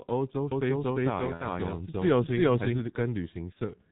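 Throughout the speech, the G.723.1 codec's heavy low-rate coding, consistent with about 6 kbit/s, cuts everything above 4 kHz, leaving muffled, hoarse sound with smeared consonants. From 0.52 to 2.80 s a doubled audio track runs: an equally loud, dry copy trails about 0.4 s behind, likely a second capture path, starting and stopping abruptly. At 1.34 to 1.46 s and 3.53 to 3.58 s, VoIP packet loss concealed by the speech codec turns the lost 60 ms and 30 ms into a fading buzzy tone or coloured noise.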